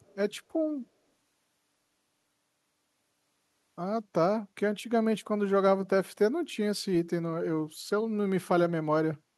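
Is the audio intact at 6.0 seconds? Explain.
Yes, the speech at 6.0 seconds plays through intact, with no audible dropout, click, distortion or other fault at that moment.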